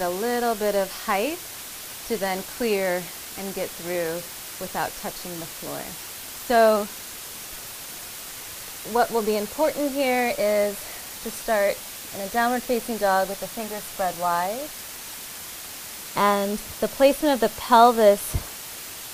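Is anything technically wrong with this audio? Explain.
Yes. Low bit depth with dither runs through the whole recording. The sound has been stored with very few levels, which fits a word length of around 6 bits, and dither was added before rounding. That turns the rounding error into a steady, even white hiss sitting only about 15 dB below the signal. Unlike undithered truncation, the hiss never turns gritty, never follows the signal's level, and never cuts out in quiet passages.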